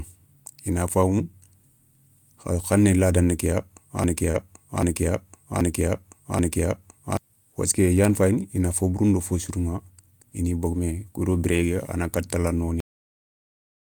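From 4.04 to 7.17 s the audio falls into a broken-record loop: one 0.78 s fragment plays four times back to back, identical each pass, and the speech that belonged there never arrives. A player or stream stall is the likely cause. Unlike a stutter or echo, the repeats are long and exact.

Right after "lada ni", between 4.31 and 4.36 s, there is a short concealed packet loss. About 20 ms of speech failed to arrive, and the decoder stretched the preceding sound over the hole before blending back. It is a brief smear rather than a silent dropout or a repeated chunk.

Overlapping its tail, 4.34 to 4.36 s holds a lost packet rebuilt from error correction. One 20 ms packet was replaced by the low-bitrate copy carried in the next packet, so nothing goes missing. Instead that sliver sounds coarser and hissier, unlike the continued-sound texture of concealment.

At 12.80 s the clip has a cut-off end. 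The final buffers were never played, so speech halts mid-sound and drops straight to digital silence with no decay. That abruptness separates it from a fade-out or a natural pause.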